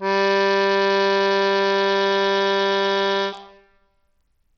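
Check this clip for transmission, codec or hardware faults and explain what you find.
One codec fault runs through the whole music clip. Nothing survives above 17 kHz, and the sound is heavily damaged. The cause is likely Bluetooth SBC compression at a starved bit pool, which fits a rate near 64 kbps. The upper sub-bands get few bits. Treble thins and flickers, and a gritty, aliased noise rides on the music.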